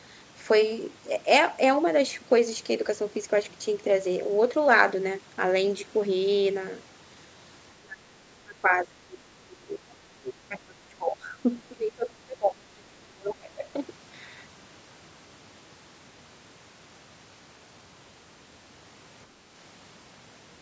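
From about 7.79 to 9.22 s the speech starts getting pushed down hard, dipping by something like 25 dB, and it keeps happening in bursts at 9.42 to 9.9 s and 10.1 to 11.45 s. That's speech suppressed in double talk. The likely cause is both ends talking at once, so the echo canceller couldn't tell the near talker from the loudspeaker echo and ducked everything. You hear the level sag.

Right at the end of that stretch, from 11.69 to 11.74 s, there's a brief scrap of the other side's voice leaking through, probably leftover loudspeaker echo the canceller didn't fully remove. It sits roughly 25 dB under the main speech, so it's just a faint flicker of a second voice. Straight after, from 11.72 to 13.68 s, comes the longest and deepest suppression, about 30 dB down for around two seconds.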